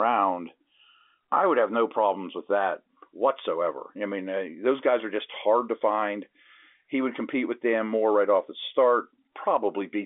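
Nothing faulty can be heard anywhere in this speech.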